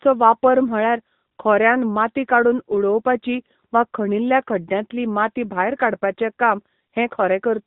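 From start to finish the speech carries the sound of the AMR narrowband mobile codec. Nothing above 4 kHz survives, but this is more than a simple telephone-band filter. The voice has a buzzy, synthetic edge, because the codec rebuilds it from a vocal-tract model excited by a few pulses in each 5 ms. The degradation is plainly audible and fits one of the codec's higher modes, around 10 kbps.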